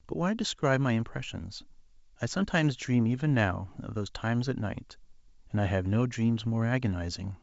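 No faults to report: the speech is carried over G.722 wideband telephone coding at 64 kbit/s, with the band extending to about 7 kHz and any coding trace faint at most.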